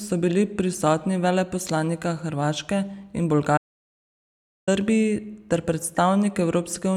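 An audio dropout to silence runs from 3.58 to 4.68 s: the speech cuts to silence for about 1.1 s, likely a lost input while recording continued writing silence.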